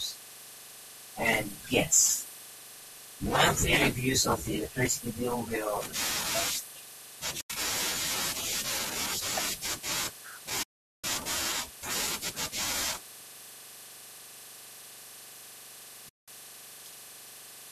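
AAC frame loss with muting cuts three holes into this speech clip, at 7.41 to 7.50 s, 10.63 to 11.04 s and 16.09 to 16.28 s, lasting 90, 410 and 190 ms. The decoder zeroes the missing frames' spectrum, and the overlapping windows ease the sound out and back in, so each gap is a soft-edged silence. The short fade lengths fit roughly 10 ms frames, likely from the low-delay AAC coding, whose damage is light.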